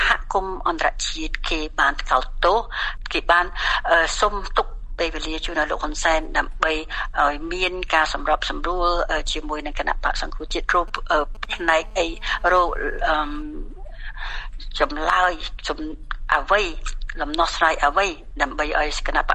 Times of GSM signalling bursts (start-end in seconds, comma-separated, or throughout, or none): 10.51-11.46